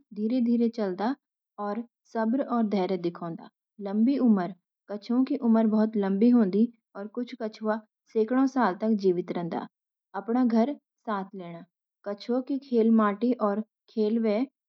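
No technical faults are audible anywhere in this speech recording.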